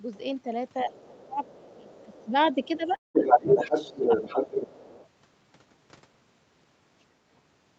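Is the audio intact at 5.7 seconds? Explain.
Yes, the speech at 5.7 seconds plays through intact, with no dropout, glitch or other fault at that moment.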